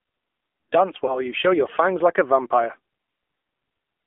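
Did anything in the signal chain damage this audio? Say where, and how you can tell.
Yes. At the codec stage, the AMR narrowband mobile codec limits the whole clip to a 250 Hz to 3.5 kHz band. A spectrogram shows a hard ceiling with nothing above it. The speech sounds plainly buzzy and synthetic, which points to a low-rate mode around 7.4 kbps.

At the network stage, lost AMR speech frames appear from 1.06 to 1.21 s. The decoder repeated its last pitch and vocal-tract settings with falling gain, so there is a brief warble and dip. This fits one lost 20 ms frame. The waveform sags there, and the spectrogram smears.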